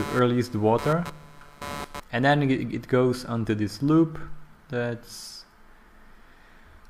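From the start to 2.0 s, a buzzing, scratchy layer sits under the sound. This is computer activity noise. Load changes in the computer's processor, graphics card or mouse disturb the ground shared with the audio circuit. That ground movement leaks into the signal. Here it pulses at around 150 Hz, giving a rough, chirping buzz. It sits roughly 15 dB below the sound. It follows the machine's activity, not the sound itself.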